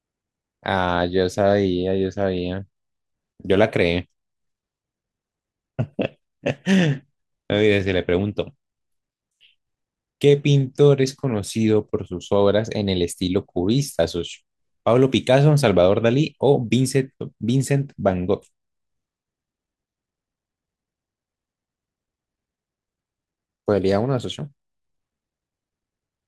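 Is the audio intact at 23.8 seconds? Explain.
Yes, the audio is intact at 23.8 seconds, with no dropout, distortion or other fault audible at that point.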